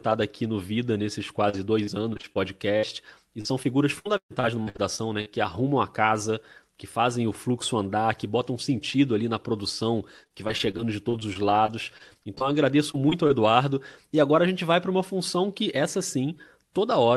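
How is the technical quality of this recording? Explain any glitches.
The recording is degraded by packet loss in four places, heard through a call codec whose content stops near 12 kHz.

Repeated packet loss (robotic sound) occurs at 1.49–2.37 s, at 3.41–5.28 s ending just before "arrumam a casa que", and at 10.24–13.31 s just after "sentido ali na produção". Packets kept going missing, and each hole was patched by extending the previous sound, concealing roughly an eighth to a quarter of each stretch. The longest hole, about 130 ms, falls in the middle stretch. The result is choppy speech with pieces missing. A spectrogram shows smeared, repeated harmonic blocks, and the waveform shows stepped, repetitive segments.

A burst of packet loss at 2.77–2.85 s drops about 60 ms. The receiver held and faded the last sound, so a brief buzz or hiss replaces the missing audio. On a spectrogram, frozen horizontal bands fade out. 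The waveform shows a decaying, periodic patch.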